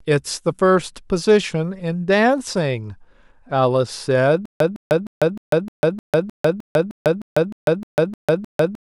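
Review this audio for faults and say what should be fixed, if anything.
From 4.46 s to the end, the speech breaks into a stutter with silent gaps: a 159 ms fragment repeats 14 times, each followed by about 148 ms of dead silence, a 307 ms cycle. That's likely a stalled stream replaying its last buffer, so the rest of the speech is lost. Give the player more buffering headroom and have it conceal or mute on underrun instead of looping stale audio.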